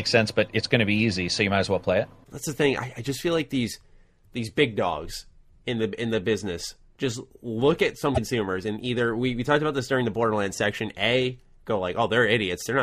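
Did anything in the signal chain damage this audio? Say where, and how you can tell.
Yes, at the codec stage. From 8.14 to 8.18 s the speech jumps ahead with a brief disturbance, which fits roughly two 26 ms MP3 frames. The likely cause is a broken MP3 bit reservoir: after a cut, frames borrowing earlier space decoded another frame's bytes.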